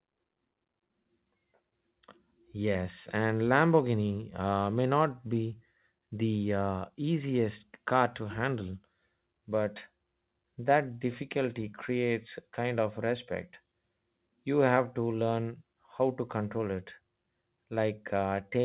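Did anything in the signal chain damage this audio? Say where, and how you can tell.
No, nothing in this speech stood out on listening as damage from any stage of the chain, beyond the narrow band of the G.711 telephone coding it travelled through.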